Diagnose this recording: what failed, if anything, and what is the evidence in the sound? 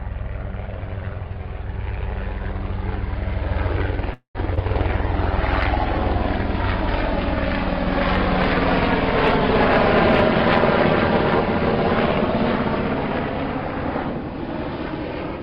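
At 4.13 to 4.37 s the network stage likely stalled: packets arrived late and the jitter buffer emptied, producing a call audio freeze. The last sound is stretched into a fading buzz for about 0.21 s, including roughly 90 ms of silence. Playback then resumes where it stopped, so nothing is lost but everything after it runs about 0.21 s later.

Short concealed packet loss follows in the network and decoder stage. At 4.55 to 4.59 s, about 20 ms of audio never arrived and the decoder synthesised roughly 19 ms to replace it, which is heard as a brief smear. At 4.63 to 4.65 s, another 20 ms was lost with nothing filled in. The receiver simply skipped ahead, trimming about 20 ms of delay, so that moment sounds like a tiny jump.

From 4.93 to 6.07 s a call bitrate drop occurs at the codec stage. The bandwidth estimate collapsed and the encoder fell from 96 kbps to 17 kbps, staying at the low rate for about 1.07 s. 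The coarser coding makes the sound rough and watery, and the highs are cut until the bitrate recovers.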